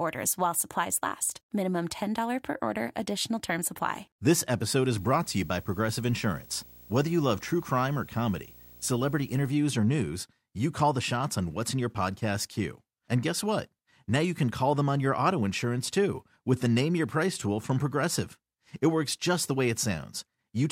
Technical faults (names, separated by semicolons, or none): video or display buzz